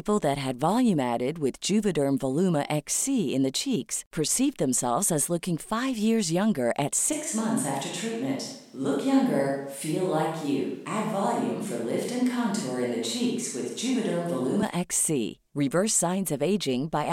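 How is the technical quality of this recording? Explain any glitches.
There's one real problem: a stretch where the sound abruptly turns distant. From 7.13 to 14.62 s, right after "five years younger at", the speech goes roomy and hollow and loses its low end, then snaps back just as suddenly. That's the signature of a switch to a distant microphone, likely because the close mic dropped out and a farther one took over. Loudness barely changes, but room noise comes up to roughly 35 dB below the speech.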